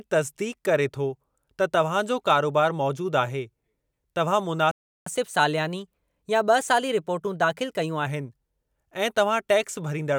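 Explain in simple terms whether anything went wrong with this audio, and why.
At 4.71 s the speech cuts out and goes silent for about 0.35 s, until 5.06 s. That's a playback stall: the player most likely ran short of audio data, or got held up, and had nothing to send out for that moment.

Right after, from 5.06 to 8.06 s, there's catch-up at higher speed. The player runs the held-back audio 1.1 times faster to win back the lost time, so the voice sounds hurried and about a semitone and a half higher before settling back.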